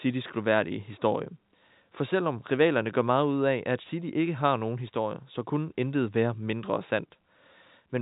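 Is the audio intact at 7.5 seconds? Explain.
Yes, the speech at 7.5 seconds is intact, with nothing there beyond the narrow telephone band of G.711 coding, which passes nothing above about 3.8 kHz.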